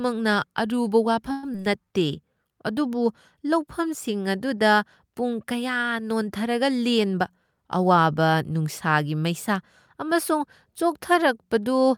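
Call audio freeze at 1.31 to 1.45 s: the sound stretches into a fading buzz for 117 ms and then carries on where it stopped, with nothing lost. This is likely the jitter buffer running dry while packets were held up in transit.

Short concealed packet loss at 1.53 to 1.56 s: about 40 ms of audio never reached the decoder, and only 8 ms was patched by continuing the previous sound. The result is a brief smear where part of the sound goes missing.

Jitter buffer speed-up from 6.99 to 8.07 s: the buffer had built up extra delay, so the receiver trimmed short pitch-period slices repeatedly, removing roughly a tenth of a second. The speech runs at about 109% speed with unchanged pitch and sounds hurried.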